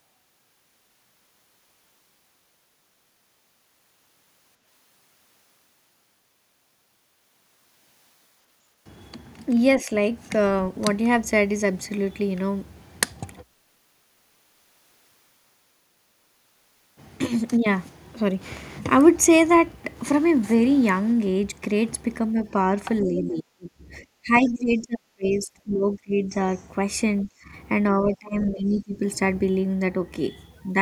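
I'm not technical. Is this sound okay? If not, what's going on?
No, there are three problems.

First, a clipped start after a pause: after nearly nine seconds of silence, the sound at 8.77 s comes in abruptly, missing roughly its first 90 ms. The playback device probably dozed off during the quiet and was slow to wake up.

Second, speech suppressed in double talk: at 9.83 to 9.89 s the voice dips slightly, and from 22.33 to 29.05 s it keeps sinking, sometimes almost vanishing, for about four seconds in total. The likely cause is someone on the other end talking at the same moment, so the echo cancelling turned everything down.

Third, the other side's voice leaking through: faint scraps of a second voice sit under the main one at 23.01, 24.35 to 25.37, 26.56 and 28.41 to 28.81 s. This is likely their voice coming out of this device's speaker and being picked up by its microphone.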